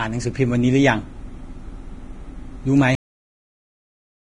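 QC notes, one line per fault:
throughout: Vorbis compression. The top end just stops, with nothing above 10.6 kHz, and the treble that's left is hissy and grainy, with consonant onsets blurred. The cause is likely a low-rate Vorbis encode, and the heavy damage points to something around 28 kbps. At that rate the encoder keeps only a rough spectral outline and quantises the high residue so coarsely that the detail turns into noise of similar energy.
2.95 s: cut-off end. The speech stops mid-sound and drops straight to digital silence with no decay, and that silence runs to the end of the clip. The sound was cut rather than faded, as if the final buffers never got written out, so the recording simply ends where the data does.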